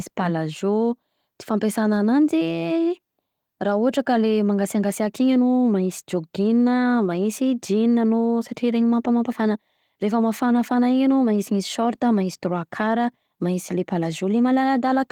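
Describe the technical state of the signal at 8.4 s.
At 8.4 s the speech is intact, carried by Opus voice compression in what sounds like its hybrid mode, with only light coding damage and the band reaching up to about 20.2 kHz.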